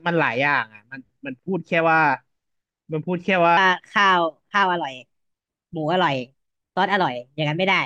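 From about 3.57 s right through to the end at 7.85 s, the speech jumps into a section at the wrong speed: it runs roughly 1.18 times too fast, so it sounds hurried and about three semitones higher, likely from being played back against a mismatched clock.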